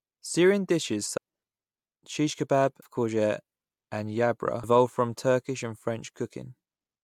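At 1.16, 2.81 and 4.62 seconds the speech hits damaged data in the compressed stream. Each time the decoder misreads corrupted frames, loses sync and hunts for the next header, giving a brief chirp, squawk, click or short hole lasting under 20 ms.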